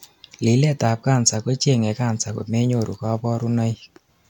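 Listening closely to this speech recording, nothing stood out as a technical problem at any point.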